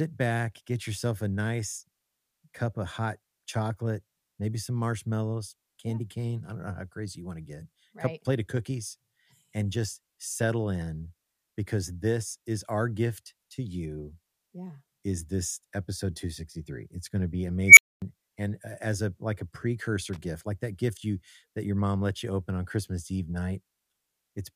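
At 17.67 s, right after "going to be", there's an unstable filter blowing up. Something in a recursive filter stage ended up with bad coefficients, so instead of settling it feeds on itself. You hear a tone at around 2 kHz swell into a very loud squeal in about 99 ms, clip hard, and then the output overflows and drops out for about 250 ms until the filter resets. Speech picks back up at "and uh as a" near 18.02 s.

Then from 20.13 to 20.18 s, between "a like a precursor" and "like that gift you", there's a quick burst of loose connector crackle. That's a worn or dirty contact flickering between connected and open as it shifts, so the signal gets chopped into fragments and you get a short, irregular scratchy rattle instead of clean audio. It's only about 50 ms long, sitting right in the speech.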